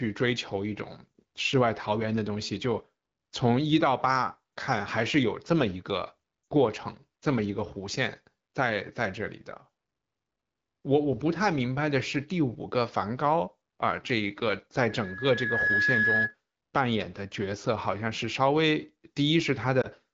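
At 6.43 to 6.47 s, lost AMR speech frames cause a 40 ms gap, which fits two dropped 20 ms frames. The decoder fills it by repeating the last good pitch and vocal-tract settings at falling gain, so the speech briefly dips toward near silence before recovering.

From 14.88 to 16.35 s, loudspeaker feedback squeal appears as a single tone at 1.7 kHz. The microphone is picking up the loudspeaker it feeds, and at that frequency the loop gain exceeds one. The tone swells over less than a second and settles a few dB above the speech.

At 19.81 to 19.87 s, a second case of lost AMR speech frames leaves a 20 ms hole, consistent with a single frame. Its concealment gives a short dip. Beneath all of this, the AMR-WB (HD Voice) coding adds only light damage to the wideband speech.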